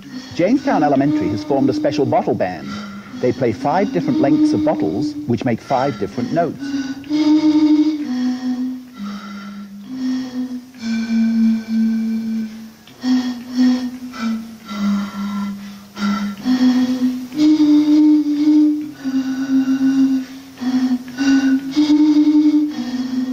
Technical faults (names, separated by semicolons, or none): gain pumping